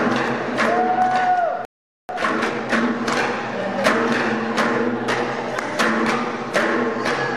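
At 1.65 s the sound just stops and stays silent for about 440 ms, coming back at 2.09 s. That's a playback stall, most likely the player running dry of data or its thread getting blocked, so the output goes quiet until it recovers.

Right after, from 2.09 to 2.97 s, you get time-compressed catch-up: the player trims its backlog by cutting out small pieces and cross-fading across the gaps. It runs at 1.5 times normal speed, so it sounds hurried while the pitch stays put.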